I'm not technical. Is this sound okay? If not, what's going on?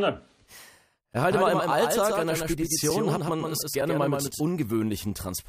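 No. At 1.13, 2.90 and 3.81 seconds there is a block of digital silence: for a few thousandths of a second the sound drops to nothing and snaps back, heard as a small tick. This happens when the program fails to deliver audio in time.

From 1.32 to 4.41 seconds there is a doubled audio track: a second, somewhat quieter copy of the speech trails the original by roughly a sixth of a second. The likely cause is the same audio being recorded twice through a slower path.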